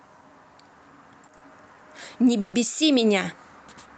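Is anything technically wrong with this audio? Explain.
Yes, the speech has two timing faults, both from the call's receive side.

From 1.37 to 1.43 s there is a short stall from a late packet. A packet arrived after its playout time, the jitter buffer ran dry, and the receiver stretched the preceding sound for about 40 ms until the data turned up. Playback then resumed at the same point, so nothing is lost. It is heard as a briefly held, slightly buzzy syllable, and the stream ends up 40 ms later than before.

From 2.40 to 2.55 s there is a call audio freeze. The last sound is drawn out for 130 ms as a fading buzzy continuation, without dropping to silence, and the speech then carries on from exactly where it stopped with nothing missing. The likely cause is packets held up in transit, emptying the jitter buffer until they arrived. The inserted gap pushes all later audio 130 ms behind. 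Across the clip, the Opus call coding limits the top end to about 8 kHz.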